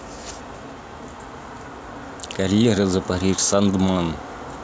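Nothing in this recording stands out as a technical fault; the speech runs without any dropout, glitch or interruption that a listener would pick up on.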